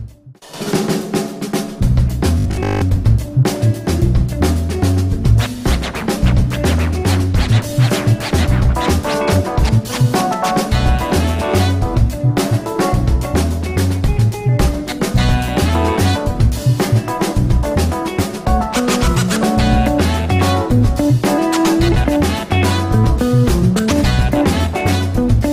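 Audio arriving too seldom, likely, leaves playback repeating its last 20 ms of sound for most of the span from 2.40 to 2.82 s while the real audio is skipped. This produces robotic sound from repeated short buffers: a rigid, metallic buzz fixed at 50 Hz.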